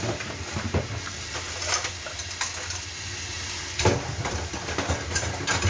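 The clip is a recording of sounds, and nothing is technically wrong with it.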